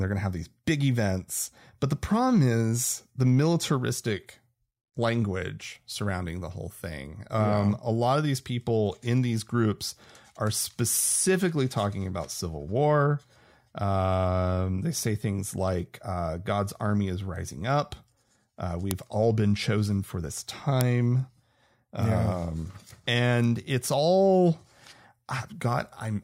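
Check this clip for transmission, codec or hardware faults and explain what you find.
There's one problem here, and it happens twice. The speech has a file header played as audio: sharp, loud clicks at 18.91 s, just before "all been chosen for," and at 20.81 s, right after "been chosen for this." Pieces were joined with their WAV headers left in, so those header bytes play as a snap.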